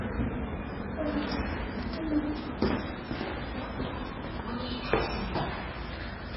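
Throughout, the sound is heavily damaged by what is likely MP3 compression at a very low bitrate, around 16 kbps. Nothing survives above 5.6 kHz, a hard ceiling on a spectrogram, while weak components flicker between frames, giving a watery, swirling texture and smeared attacks.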